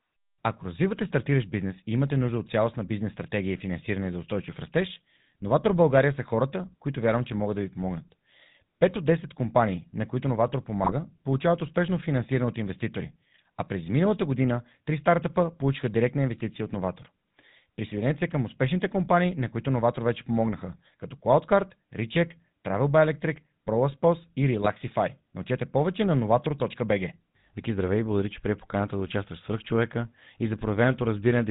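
From start to finish the speech carries the sound of the GSM full-rate codec, and the damage is plainly audible. The coder rebuilds each short stretch of voice from a vocal-tract filter driven by a sparse train of regularly spaced pulses, so the result has a buzzy, gravelly roughness, and nothing above 4 kHz survives, leaving the top end dull. This sound points to the 13 kbps full-rate codec.

At 10.84 to 10.93 s, just before "получават успешно финансиране от", GSM bit errors break the voice into a brief squawking, gargling burst. Corrupted filter, pitch and gain values bend the spectrum and jolt the level. The 86 ms length fits about four damaged 20 ms frames. A shorter hit follows at 24.62 to 24.66 s, a quick pop and squawk whose 40 ms span suggests two bad frames.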